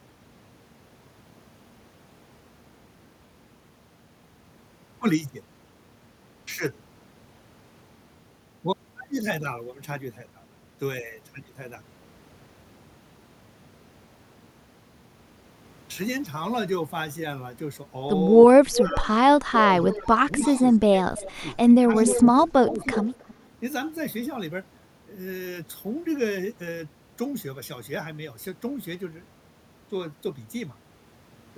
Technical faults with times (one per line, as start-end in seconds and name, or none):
18.48-18.96 speech suppressed in double talk
18.73-19.08 echo leak
19.49-22.86 speech suppressed in double talk
19.80-22.26 echo leak
22.81-23.34 echo leak